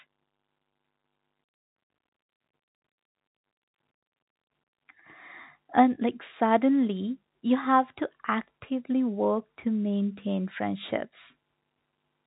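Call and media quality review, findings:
No faults found in this speech clip. The G.711 telephone coding path works as expected: nothing above 4 kHz comes through, and any quantisation noise under the speech is faint and tracks its level.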